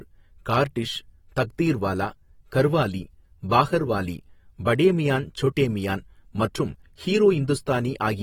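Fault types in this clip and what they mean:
AAC compression, throughout: the speech carries plainly audible codec damage, likely from AAC-LC coding at a rate that fits roughly 46 kbps. The encoder splits the signal into frequency lines frame by frame and spends its scarce bits where a hearing model says they matter most, coarsening the rest. Here nothing survives above 19.3 kHz, and the coarse quantisation leaves the speech sounding smeared, with a warbling, processed texture.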